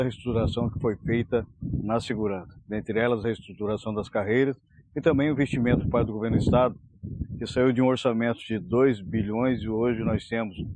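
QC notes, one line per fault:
No faults detected on this pass; nothing to log.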